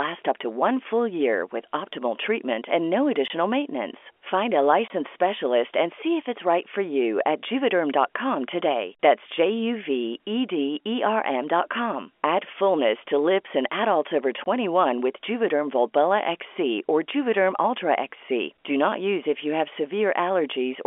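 Packet loss filled with silence cuts the speech at 3.28–3.30 s, 4.88–4.90 s and 14.44–14.46 s. Each 20 ms hole fits a single lost packet replaced by silence, and has hard edges on the narrowband G.711 line.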